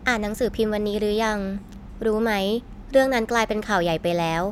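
Listening to the speech recording turned up nothing that stood out as a technical fault.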